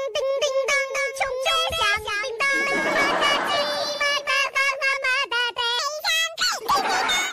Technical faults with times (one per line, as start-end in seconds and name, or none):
0.37-5.03 doubled audio track
5.79-7.33 section at the wrong speed